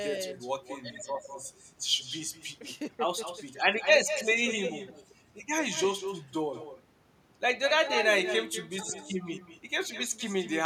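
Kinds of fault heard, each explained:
Echo with no canceller: the far end's loudspeaker feeds this speech back into its microphone unremoved, so every phrase returns around a fifth of a second later, about 11 dB quieter and thinner. Waveforms show faint delayed copies trailing each burst; spectrograms show ghosted, smeared harmonics.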